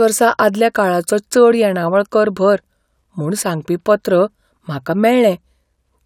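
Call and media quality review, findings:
Nothing to flag on this speech clip: no faults turned up anywhere in the recording, so there's nothing to ticket.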